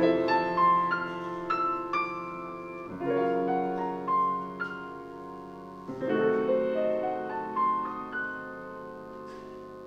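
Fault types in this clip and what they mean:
Mains buzz: A steady, raspy buzz runs under the whole clip, sitting about 30 dB below the programme material. It comes from mains interference at 50 Hz, where sharp switching spikes, such as those from a dimmer, a rectifier or an unshielded cable, enter the signal path twice per cycle and produce a dense series of harmonics. On a spectrogram this shows as evenly spaced horizontal lines at multiples of 50 Hz, extending up to several kHz.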